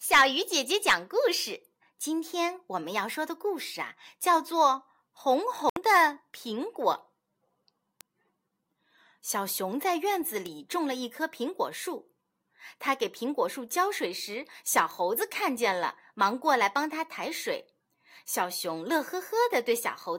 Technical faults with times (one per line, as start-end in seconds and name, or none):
5.69-5.76 Bluetooth stall
8.01 bit error spike
10.46 bit error spike
14.91 bit error spike